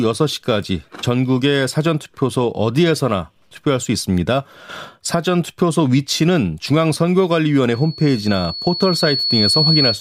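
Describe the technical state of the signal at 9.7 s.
A piercing 4.4 kHz squeal sits a few decibels above the speech, having swelled over about two seconds: loudspeaker feedback squeal, from 7.74 s to the end, where the microphone re-amplifies the speaker's output.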